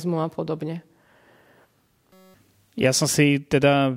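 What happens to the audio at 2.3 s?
A system hang loop runs from 2.13 to 2.34 s: the playback froze while the hardware kept replaying one 5.33 ms slice, fitting a 256-sample buffer, about 40 times. It gives a steady 188 Hz buzz rather than a dropout's silence, replacing about a fifth of a second of speech.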